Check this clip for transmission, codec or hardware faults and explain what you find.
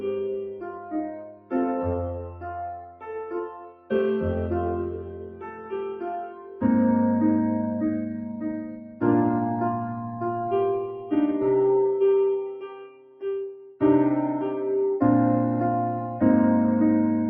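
A speech-trained noise suppressor is running on non-speech audio, so it treats steady sound as noise and lets gain swing by around 10 dB, leaving the sound pumping and thinning.

Sound cut by the noise suppressor occurs at 0.48–1.53 s, 2.22–3.08 s, 3.48–3.91 s, 4.98–5.73 s, 6.23–6.63 s, 8.70–9.02 s and 12.56–13.82 s. The suppressor misjudges sustained material, pulling it down by about 9 to 15 dB, so held sound and decays sink.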